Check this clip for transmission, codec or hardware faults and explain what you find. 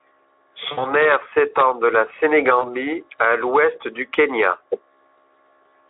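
Two dropouts from VoIP packet loss concealed by the speech codec. At 0.71–0.91 s, before "aire s'étend de la", about 60 ms is lost. At 2.60–2.72 s, before "à l'ouest du", about 40 ms goes. The decoder extends the last sound into a fading buzzy tone or coloured noise, and the speech stays weak briefly after each gap. The Speex coding is light.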